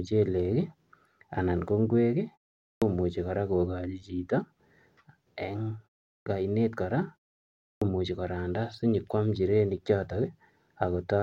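At 2.70, 6.14 and 7.70 s, speech bursts in abruptly after short pauses (0.41, 0.34 and 0.6 s), its opening sounds missing. This is clipped start after a pause: the output device sleeps in silence and needs roughly 115 to 122 ms to wake, swallowing that onset.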